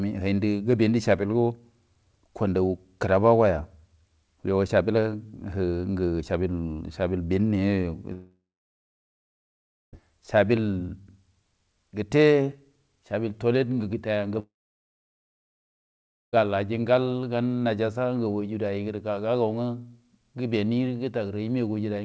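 At 8.13 s the speech breaks off: the last sound is stretched into a short fading buzz, then silence holds for about 1.5 s before the speech resumes at 9.94 s with roughly 1.8 s gone. The same happens from 14.40 to 16.37 s, with about 1.9 s missing and near-silence for about 1.8 s. Both gaps are likely a long network dropout, with the receiver concealing briefly before giving up. The wideband call audio around them carries nothing above 8 kHz.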